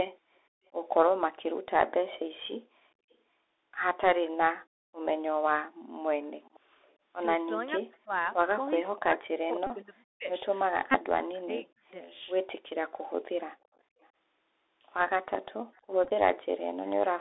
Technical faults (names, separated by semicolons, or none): Bluetooth CVSD headset codec; echo leak; background gated by the echo canceller; speech suppressed in double talk; Bluetooth headset packet repeated